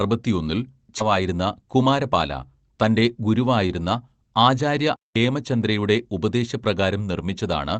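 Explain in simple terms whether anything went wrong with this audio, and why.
Two things went wrong, both early in the clip.

At about 0.99 to 1.01 s there is a skip ahead. Roughly a second of speech never gets played. Either it was lost on the way, or the call's receiver had fallen behind, with later audio already waiting, and threw away the stretch it was about to play. Either way, playback jumped forward. There is no pause to mark the spot. The speech before and after the jump is simply stitched together, so part of what was said just vanishes.

From 1.75 to 2.14 s there is a jitter buffer speed-up. The receiver was holding more audio than it wanted, which adds delay. To catch up, it snipped out many tiny slices of sound, about a twentieth of a second in total. The speech plays about 10 percent faster here. The pitch stays the same, so the voice does not sound higher. It just sounds briefly rushed.

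Both happened inside a normal internet call, where the sound is compressed on the way through.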